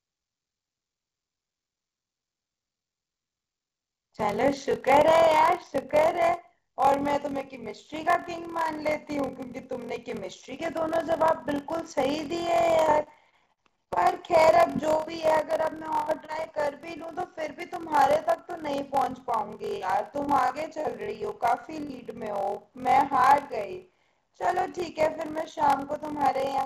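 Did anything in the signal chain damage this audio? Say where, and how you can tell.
Yes. At the driver or buffer stage, a block size mismatch (padded) zero-fills each block read, which fits a 1024-sample read. The result is a 43.1 Hz buzz throughout, with the speech slowed to 0.861 times speed with its timbre kept.

On the network side, repeated packet loss from 12.84 to 15.33 s, 15.77 to 16.47 s and 19.76 to 21.10 s left gaps of up to 63 ms. Concealment continues the last sound across each gap, which gives a choppy, robotic sound.

A short concealed packet loss between 21.61 and 21.66 s lost about 20 ms. The receiver extrapolated across it, leaving a brief smear or wobble.

A burst of packet loss from 21.82 to 21.91 s dropped about 60 ms. The concealed audio fades as a held buzz or hiss, and the speech then resumes with that piece missing.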